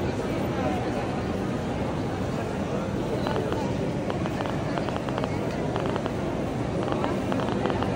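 From 3.27 s to 7.84 s a train of clicks runs over the sound: around thirty sharp, near-identical ticks at roughly 7 per second, spaced irregularly rather than on a steady beat. Each click stands well clear of the programme, peaking some 20 dB above it, so the ticking stays obvious throughout and is not masked. The cause is likely electrical interference from nearby equipment or a faulty connection or power supply.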